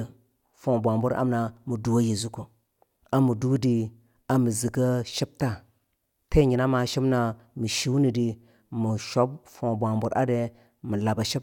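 Listening through the speech, nothing stood out as a technical fault at any point.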